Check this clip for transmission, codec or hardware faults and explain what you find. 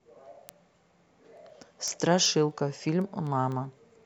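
One fault is present. Word clock ticks run from 0.11 to 4.03 s. An unlocked receiver clock drifts about 150 ppm, slipping one sample roughly every 0.15 s and producing around thirty regular ticks.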